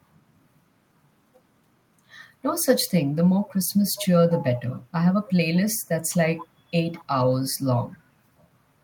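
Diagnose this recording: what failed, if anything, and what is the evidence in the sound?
Echo leak in call processing: faint copies of the speech, 208 ms late and about 15 to 30 dB down, at 3.95, 4.71, 5.55, 6.13, 6.39 and 6.94 s, likely residue an echo canceller missed.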